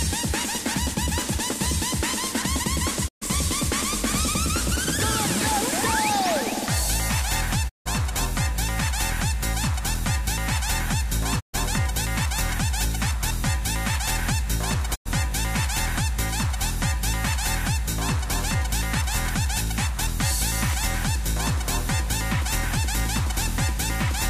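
Digital broadcast dropouts mute the sound at 3.07–3.24, 7.68–7.88, 11.39–11.56 and 14.94–15.08 s, as the receiver loses frames. Each shows as a brief 20 ms fade into a blank spectrogram band.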